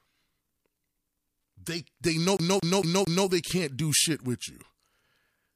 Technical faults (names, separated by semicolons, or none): CD stuck on one turn